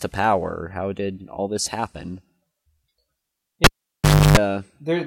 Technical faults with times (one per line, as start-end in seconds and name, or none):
3.64-4.37 cable pulled and plugged in